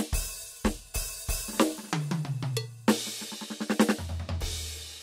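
No technical faults can be heard anywhere in this music.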